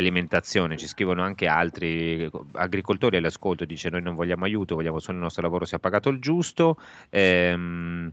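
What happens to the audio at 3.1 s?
Nothing goes wrong at 3.1 s; the speech carries straight through, with only the ordinary band-limited character of the call path it came over.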